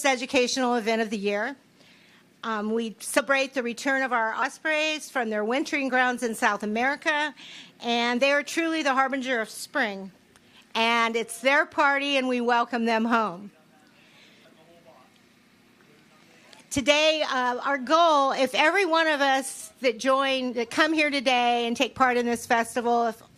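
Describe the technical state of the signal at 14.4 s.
At 14.44 s, compressed frames are skipped. About 150 ms of audio drops out, which fits roughly seven lost 21.3 ms frames. The audio jumps ahead at the join, seen as a waveform discontinuity and a vertical smudge on the spectrogram.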